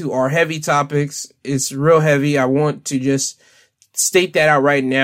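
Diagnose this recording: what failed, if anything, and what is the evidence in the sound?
Nothing in the recording points to a failure at any stage of the chain. There is no event in the speech that calls for a diagnosis.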